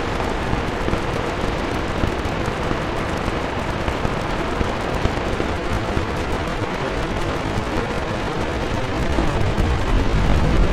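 From 5.50 s to the end, the sound abruptly slows to 0.69 times its original pace while its pitch holds steady. It drags. This is a time-stretched section. Software likely lengthened that stretch to fill a set duration and kept the pitch by repeating short slices of the audio.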